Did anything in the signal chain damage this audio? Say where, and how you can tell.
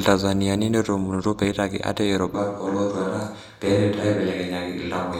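Yes. From 2.35 s to the end, the speech turns suddenly roomy and hollow and loses bass, with background noise about 35 dB below the speech. This is likely a switch to a distant microphone at the capture stage, replacing the close microphone's signal. The level stays about the same, so it isn't a gain change. Added reverb or an EQ cut would not bring in new room noise, and neither would flip the sound over in an instant like this.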